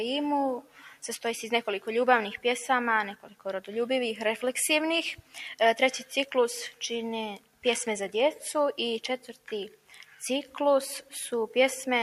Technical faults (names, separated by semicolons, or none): noise suppressor applied to music or sounds; sound cut by the noise suppressor